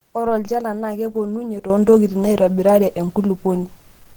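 From the start, the speech sounds hoarse and muffled, with grainy, rough texture. The likely cause is Opus compression in its hybrid speech mode, at a rate that fits about 16 kbps. Content still reaches about 20.2 kHz. The damage is plainly audible.

At 1.70 s the level leaps up by about 11 dB and stays there to the end. Speech and background noise jump together, with no ramp. This is a sudden gain jump, likely from a gain change applied between one sample and the next.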